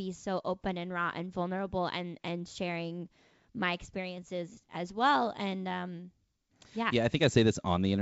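No technical faults are audible.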